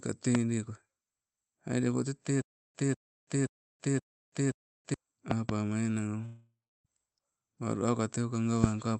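A sharp pop rises about 15 dB above the speech at 0.35–0.37 s, a double pop reaches about 20 dB at 5.31–5.51 s, and a single pop of about 20 dB lands at 8.64–8.66 s. Each loud pop is likely a voltage pulse from a plug, switch or static, with the speech continuing underneath.

From 2.42 to 4.94 s, a 195 ms burst repeats four times, each followed by 330 ms of dead silence on a 525 ms cycle. This stutter with silent gaps likely comes from a stalled stream replaying its last fragment on each retry.

At 6.25–6.87 s, the sound smears into a fading buzz, then about 310 ms of silence, and 600 ms of speech is gone. This long network dropout is likely the receiver filling a gap where no audio arrived.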